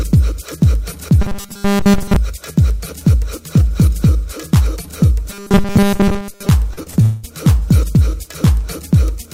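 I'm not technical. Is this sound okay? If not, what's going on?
No. There are three kinds of problems.

First, robotic sound from repeated short buffers, from 1.22 to 2.16 s and again from 5.30 to 6.49 s. The sound turns hard and metallic, with a steady buzz at 200 Hz. The likely cause is that new audio arrived too slowly. The system kept replaying a tiny piece, about 5 ms long, to fill the wait. Most of the real sound in those stretches was skipped.

Next come three cases of short concealed packet loss, at 6.73, 6.83 and 6.90 s. Each hole is only a few hundredths of a second, about 20 to 40 ms of missing audio. The player patched each gap by stretching the sound just before it. You hear a quick smear or wobble, and a tiny bit of sound may vanish.

Last is a long network dropout from 7.02 to 7.25 s, lasting about 0.22 s. This was likely a moment when nothing came through at all. The player filled about 0.21 s of the gap by continuing the last sound as a fading buzz or hiss. 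There is no silence there. When the real audio returns, the missing part is simply gone.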